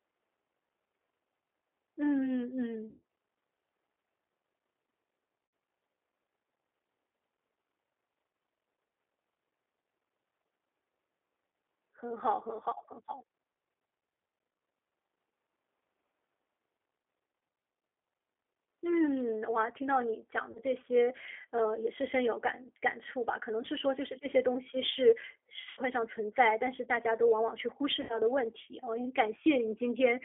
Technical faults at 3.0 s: G.729 codec; VoIP packet loss concealed by the speech codec

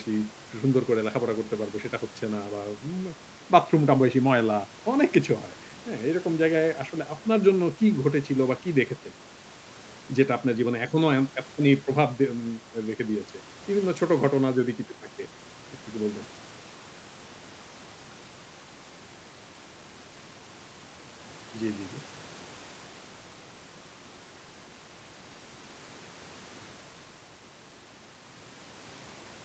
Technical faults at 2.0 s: none

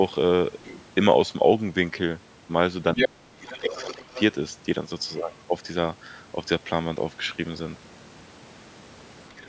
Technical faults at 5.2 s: other side's voice leaking through

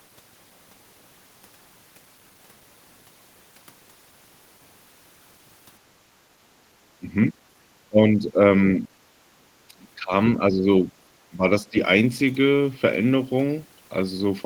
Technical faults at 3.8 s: none

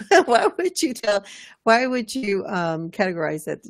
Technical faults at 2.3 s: burst of packet loss; short concealed packet loss

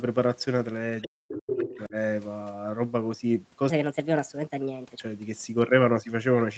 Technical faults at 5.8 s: none

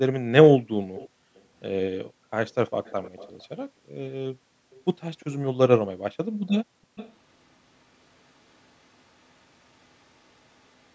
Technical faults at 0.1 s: none

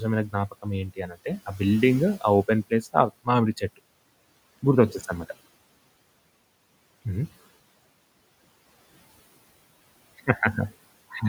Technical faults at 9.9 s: none

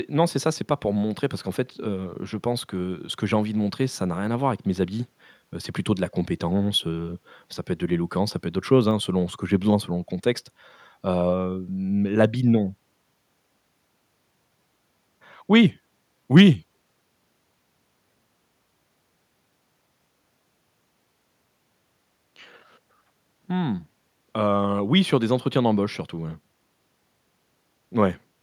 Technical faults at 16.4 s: microphone overload

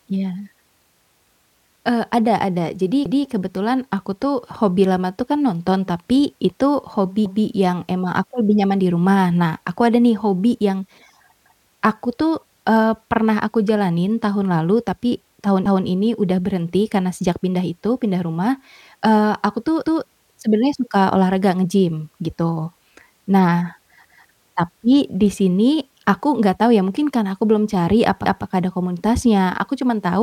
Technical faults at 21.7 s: none

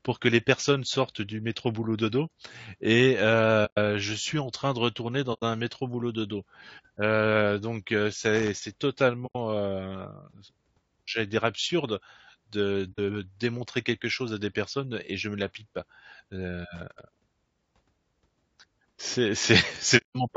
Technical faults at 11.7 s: low-delay AAC compression

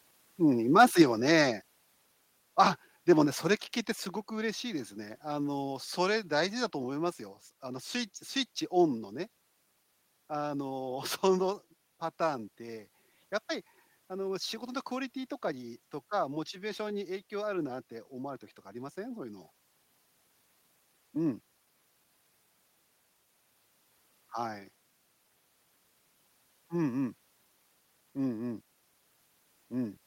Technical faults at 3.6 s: microphone volume stepped down

